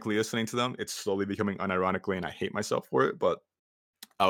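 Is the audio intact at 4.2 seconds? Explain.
Yes, at 4.2 seconds the speech plays through intact, with no technical fault to be heard at that moment.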